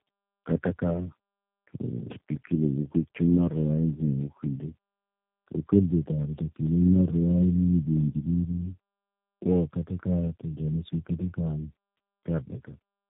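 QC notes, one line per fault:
Throughout, tandem speech coding: the speech passes through several low-rate coders in a row. The roughness, muffling and warble fit about four stages, such as repeated 8 kbit/s G.729A legs. Each stage recodes the previous one's damage. Nothing is heard above 3.7 kHz.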